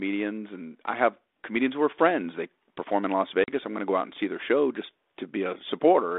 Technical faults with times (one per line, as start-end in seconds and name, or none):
3.44-3.50 packet loss on an ADPCM call